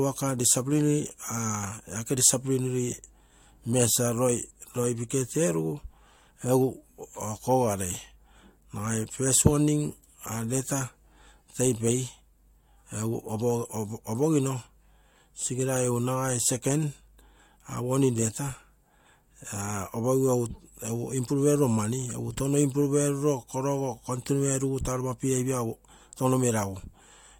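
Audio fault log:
Nothing stood out on listening to this speech recording.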